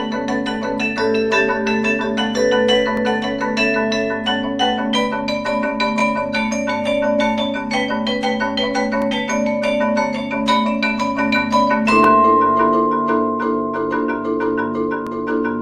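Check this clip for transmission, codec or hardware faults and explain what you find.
One fault is present: overlapping chunks, heard as a brief click or stutter repeating every 3.0 s.

Overlapping chunks: at 2.97–3.00, 6.00–6.02, 9.02–9.04, 12.04–12.07 and 15.07–15.09 s, a short stutter sounds where about 23 ms of audio plays twice. Each 3.0 s chunk starts before the previous one ends.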